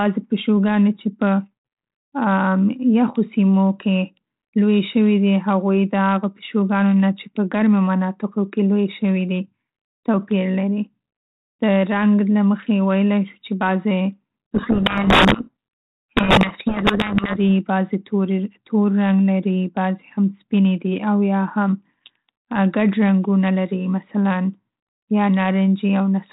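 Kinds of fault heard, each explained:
Codec payload misread: from 14.55 to 17.37 s, just after "چې بعضې", the speech sinks under harsh, grinding distortion because the receiver unpacks each G.726 code word with its bits in reverse order, so the decoder's difference values are wrong until the packing agrees again. The underlying 32 kbit/s G.726 path, with nothing passing above 4 kHz, shows only light coding damage elsewhere.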